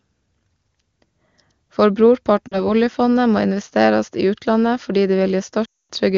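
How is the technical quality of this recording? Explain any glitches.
Two dropouts from lost AMR speech frames interrupt this speech, which carries the full, clear bandwidth of the AMR wideband (HD Voice) codec at a high rate.

Lost AMR speech frames, 2.48 to 2.62 s and 5.65 to 5.91 s: radio errors corrupted frames, and the decoder filled the gaps by reusing the last good pitch and vocal tract settings at falling gain. The first loss spans about 40 ms, two frames, and the sound sinks toward near silence across it. The second covers about 240 ms. The sound drops to near silence within two frames, and returns weak or rough for a moment.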